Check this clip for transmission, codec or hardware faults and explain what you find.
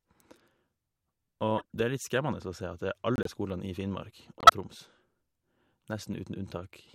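Three bursts of corrupt frame decoded damage break up this speech.

At 1.58 to 1.75 s, a short chirpy burst of noise peaks around -20 dBFS. At 3.16 to 3.29 s, just after "at det", a similar squeaky blip sits at about the same level. At 4.39 to 4.50 s, a sharper, much louder blip reaches about -5 dBFS. In each, damaged compressed data was decoded anyway, placing energy at wrong frequencies. The first two span what sounds like several consecutive frames, the last fewer.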